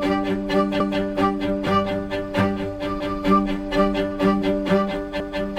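Overlapping chunks appear at 0.80 to 1.00 s, 3.00 to 3.20 s and 5.20 to 5.40 s. The audio was handled in 2 s chunks, and each new chunk began 200 ms before the previous one had finished. That means the same 200 ms stretch plays twice at every join. The result is a brief stutter with a click at the seam, recurring regularly about every 2.2 s, since each repeat adds its 200 ms to the timeline.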